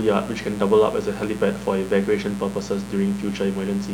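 A steady, raspy mains buzz sits under this speech from start to finish, riding about 15 dB below the talker. It's built on 60 Hz, with sharp switching spikes twice per cycle spraying harmonics up into the kHz range, the kind of thing a dimmer, rectifier or missing shield lets in.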